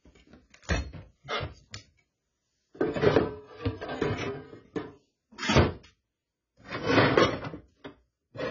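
From start to finish, the sound is heavily damaged by what is likely AAC compression. Nothing is heard above 7 kHz, so the top end is cut away and everything sounds dull. The encoder had too few bits for the detail, which fits a very low bitrate near 16 kbps. Transients smear, and sustained parts take on a warbling, fizzy texture.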